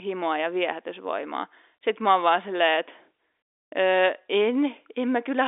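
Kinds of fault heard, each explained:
No kinds of fault are heard in this clip, so there are none to explain.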